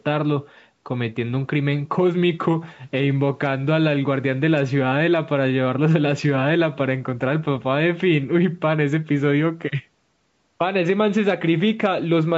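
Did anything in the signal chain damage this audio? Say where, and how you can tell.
No, none of the stages damaged this speech: it carries the normal marks of call microphone processing, with the lowest bass trimmed by its high-pass filter and nothing above 8 kHz, and neither of these is a fault.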